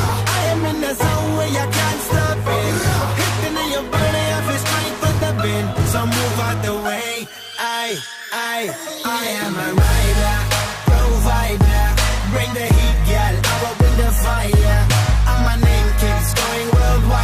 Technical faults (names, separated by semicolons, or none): none